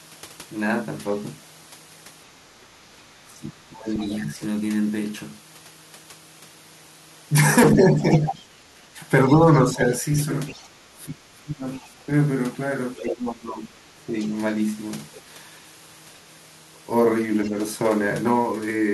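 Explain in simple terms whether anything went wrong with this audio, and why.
Two problems can be heard. First, the other side's voice leaking through. A faint second voice sounds from 2.63 to 4.08 s, 10.48 to 13.01 s, and briefly at 15.14 s. A louder scrap comes at 8.24 s. The likely cause is loudspeaker echo the canceller missed.

Second, speech suppressed in double talk. From 3.26 to 4.41 s the talker drops sharply, for about a second. From 7.76 to 14.16 s it dips less deeply, in pieces, for about three seconds in total. Both sides were likely talking at once, so the canceller turned down both.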